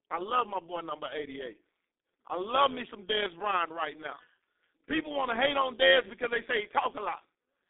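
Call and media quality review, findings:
Overlap-add ripple, whole clip. Metallic buzz with extra tones around each note under the speech, level swinging about 11 dB at a rate around 150 Hz. Probable component: a frame-based processing stage resynthesising with overlapping windows whose gains don't sum flat, so each frame pumps the level once.

G.723.1 codec, whole clip. Muffled, hoarse speech with smeared consonants. Band roughly 250 Hz to 3.7 kHz, nothing above 3.8 kHz, heavy coding damage. The sound fits the 6.3 kbit/s mode. Coarse 30 ms frames and a slowly updated voice model blur transitions.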